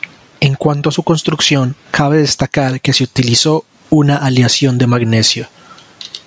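From 0 to 2.55 s, just before "que se utilizó una", there is channel delay (comb filtering). One channel lags by a couple of samples, a few hundredths of a millisecond. The mono sum cancels near 10 kHz. With the call band ending at 8 kHz, the top sounds dull.

Gain pumping runs through the whole clip, with the gain swinging by about 20 dB. Levels sound squashed and flattened. The likely cause is gain set far too high, with a fast limiter clamping down.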